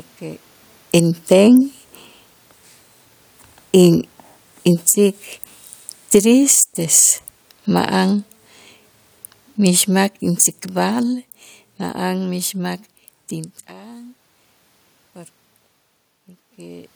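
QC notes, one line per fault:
3.69–8.33 s and 9.6–12.82 s, automatic gain falling: the gain control judged the input too loud and pulled its gain down gradually, by about 6 dB over the first span and about 5 dB over the second. Speech and room noise sink together, the mark of a gain change rather than a source change. The level shifts near 0.5 s and 13.5 s sound like the talker moving, not gain action.
4.95–5.32 s and 6.59–7.44 s, automatic gain rising: inside the first falling span, the control briefly judged the input too quiet and pushed gain back up, by about 3 dB in the short first swell and about 7 dB in the longer second one. Voice and background rise together each time, so the level rocks up and down within that stretch.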